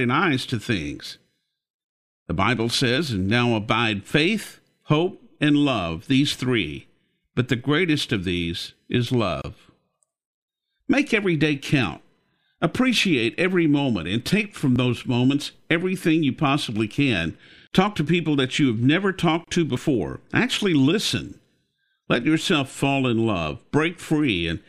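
A speech clip with two kinds of glitch. There's a gap at a join of encoded pieces at 9.42–9.44 s, right after "greatest of these is", lasting 26.5 ms, and again at 19.44–19.48 s after "that you have never", lasting 31 ms. That ten-second spacing suggests separately encoded chunks stitched together without trimming the encoder's leading delay and end padding, so short silences with smeared edges sit in the middle of the sound. There's also audio missing between chunks: a quick skip at 14.76 s, between "moment and take from" and "those moments everything you", and another at 19.77 s. Each loses roughly 20 ms with no silence left behind, likely from a recorder working in 5-second blocks and dropping a sliver at each handover.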